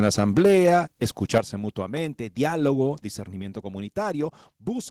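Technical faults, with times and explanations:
0.39 s, microphone volume stepped down: The call software likely lowered the microphone's input volume in a single step, cutting the level by about 2 dB. The speech and background drop together at once rather than fading.
1.34 to 1.38 s, microphone overload: The input volume was likely set too high, so the peaks just before "mutuamente diálogo" drove the converter about 3 dB past its limit. A sizeable share of the waveform has its tops sliced flat, giving a brief harsh, crackling edge to the loudest moment.
1.38 s, microphone volume stepped down: Right after that clipped peak, the software likely reacted to the overload by cutting the input volume about 8 dB in one move. The level then falls sharply before "mutuamente diálogo", and the background drops with the speech.
3.42 s, microphone volume stepped down: After "mutuamente diálogo", the input volume was likely lowered again, by about 4 dB, producing another sudden drop in both speech and background level.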